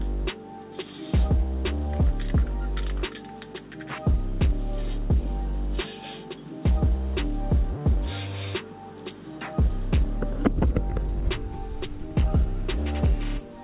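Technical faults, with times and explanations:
Nothing here counts as a fault; the sound comes through a call path with nothing above about 4 kHz, which fits a narrowband telephone codec such as G.711 at 64 kbps, so the top end is simply that of an ordinary phone line.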